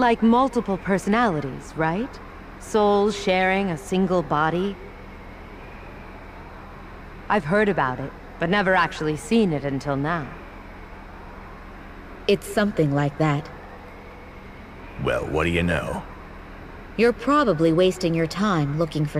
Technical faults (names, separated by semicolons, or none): none